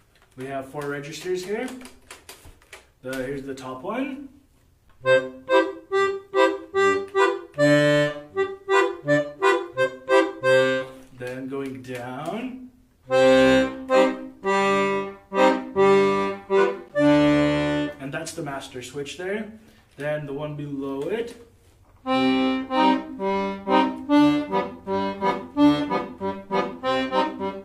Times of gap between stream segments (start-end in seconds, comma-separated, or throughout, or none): 4.89, 16.88